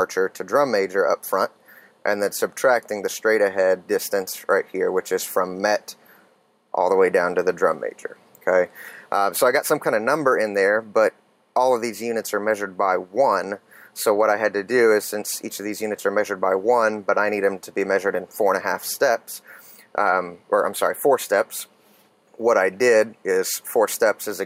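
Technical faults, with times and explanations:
Throughout, gain pumping. The level swings by around 10 dB. Loud and quiet passages sit unnaturally close in level, so the whole sound feels squashed and breathing. The likely cause is input gain set far too high, with a fast limiter or compressor clamping down on each peak and releasing between them.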